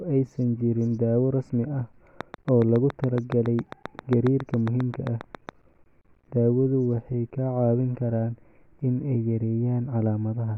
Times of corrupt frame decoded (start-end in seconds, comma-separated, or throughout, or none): none